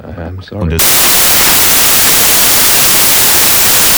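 From 0.79 s to the end, the samples are built from the wrong bytes: the reader misaligns or misorders each sample's bytes, so the rapidly changing low-order bits land in the most significant positions. The sound collapses into loud, harsh broadband noise.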